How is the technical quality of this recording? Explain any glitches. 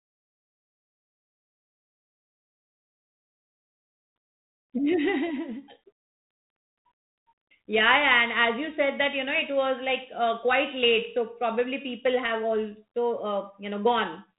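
No glitches to report: the recording holds steady throughout, with no dropouts, clicks, clipping or level jumps in the speech.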